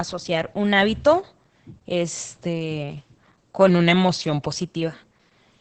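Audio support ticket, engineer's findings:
Muffled, hoarse, slightly robotic speech throughout, nothing above 8.5 kHz. Opus voice compression, SILK wideband mode, coarse excitation coding, damage consistent with a low bitrate around 10 kbps.

3.69–4.55 s: speech drops about a semitone (104 cents), slows 5.9%, then snaps back. Likely a drift correction step, clock-matching resampler briefly changing playback rate.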